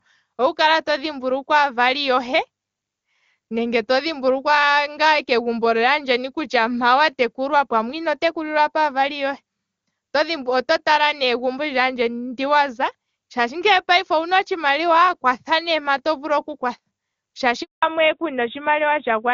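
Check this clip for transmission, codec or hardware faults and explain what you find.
Two faults appear near the end of the speech: a brief dropout followed by a lasting loss of bandwidth.

A handover gap runs from 17.63 to 17.83 s. No speech frames arrive while the call switches networks, leaving 200 ms of silence. The sound dies away within a few tens of milliseconds rather than crackling or stuttering as packet loss would.

A fallback to narrowband follows from 17.83 s to the end. The call drops from HD Voice to an older narrowband codec, which fits AMR-NB at 12.2 kbit/s. Nothing above 4 kHz remains, so the sound turns duller and rougher. Unlike a momentary glitch, the change persists.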